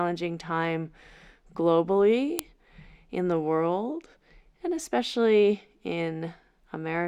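At 2.39 s there's a sharp, loud click cutting straight through the speech. That's a file header played as audio: a second WAV chunk got joined on without its header being stripped, so those few dozen bytes of file metadata went out as if they were samples. They don't follow the waveform at all, which is why it lands as one hard snap right at the join, regardless of what the speech is doing there.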